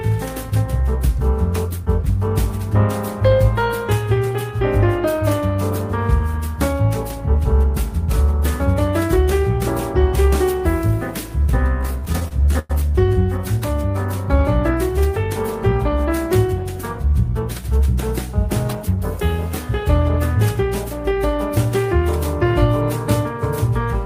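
From 11.81 to 12.71 s the sound drags and stutters through 13 brief hold-ins, the longest 104 ms: repeated stalls (stutter), as late packets emptied the jitter buffer.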